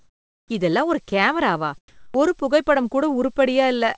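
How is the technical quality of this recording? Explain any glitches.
The recording has a call-quality character, with nothing above 8 kHz, which fits a wideband call codec. It also shows the gaps and seams of a voice detector switching transmission on and off.

Comfort noise in place of the background runs from the start to 0.5 s and again from 1.88 to 2.14 s, after "இதெல்லாம் ஒரு கேமராவா". In both stretches the natural room background gives way to a smooth, featureless hiss. It is about 13 dB quieter in the first stretch and about 8 dB quieter in the second. The likely cause is that the sender stopped transmitting during the pauses and the receiver synthesised shaped noise to fill them. Unlike a true dropout, the gap never goes silent. Its texture is simply too even and too low.

An onset clipped by the voice detector occurs at 0.48–0.50 s, just before "இதெல்லாம் ஒரு கேமராவா", and again at 2.11–2.14 s. 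In each case speech resumes with its first 20 to 30 ms missing, so the sound starts hard, without its soft rise. The detector was likely slow to register that sound had returned, so comfort noise covered the opening. This fault sits exactly at the end of a comfort-noise stretch, which sets it apart from a cut in the middle of a phrase.

Sound dropped by the voice detector occurs at 1.10 s, right after "இதெல்லாம் ஒரு". About 20 ms of speech is replaced by comfort noise, a brief gap within the phrase. The detector likely mistook the sound for background and stopped sending it. This fault is distinguished from a clipped onset by where it falls. It is not at the start after a pause but inside continuous sound, which resumes immediately afterwards.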